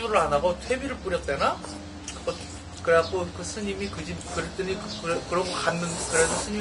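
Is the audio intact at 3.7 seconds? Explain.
No. At 3.7 seconds, as across the whole clip, the sound shows Vorbis compression damage, likely from a low bitrate around 32 kbps. Nothing remains above 10.6 kHz, and the coarsely quantised treble turns fine detail into grainy hiss, roughening tones and softening attacks.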